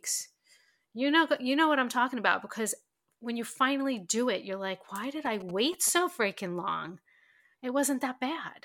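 A 2G phone close to the recording chain was exchanging short signalling bursts with its network, and the audio circuitry rectified that radio energy into the speech path. From 5.26 to 5.98 s, just before "freaking long", these GSM signalling bursts come through as a galloping run of brief buzzes repeating at 217 Hz. They sit roughly 15 dB below the speech.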